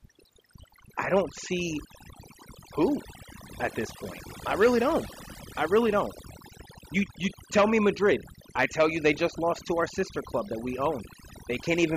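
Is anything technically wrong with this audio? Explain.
Yes. Overdone noise removal runs through the whole speech clip: frequency bands close to the estimated noise are pushed down or cut out, taking quiet speech detail too. The background drops and breaks up into twinkling specks. A simple gate would instead switch off the whole signal between phrases.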